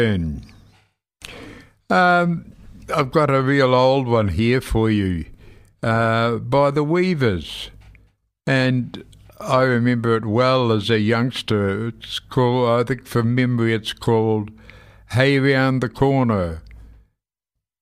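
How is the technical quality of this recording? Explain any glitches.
No audible glitches or faults.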